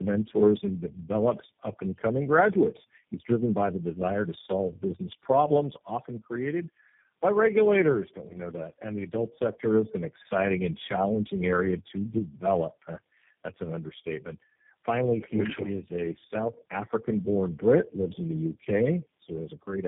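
The call crossed several network links, each with its own speech codec, so this speech was decoded and re-encoded at every border: tandem speech coding. The roughness points to about four speech coders in a row, which fits a chain ending in G.729A. Each pass re-codes the previous pass's errors, so the speech throughout sounds rough, muffled and warbly, with nothing above 3.7 kHz.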